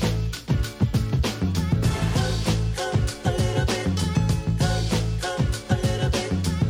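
Nothing in the audio stood out as a technical problem on listening.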